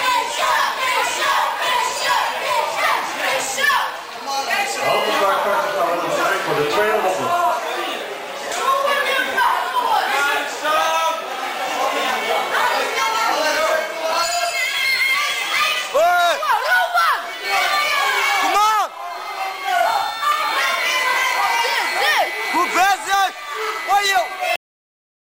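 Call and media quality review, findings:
Cut-off end at 24.56 s: audio stops mid-sound, straight to digital silence with no decay. Final buffers never written or played out; likely capture or file-finalisation stage.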